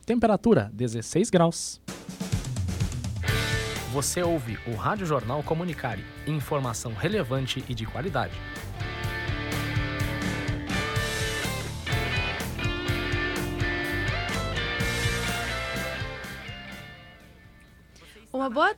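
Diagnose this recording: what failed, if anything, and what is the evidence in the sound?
Nothing failed: the signal passes through capture, conversion and playback with no audible break, distortion, dropout or level fault at any point.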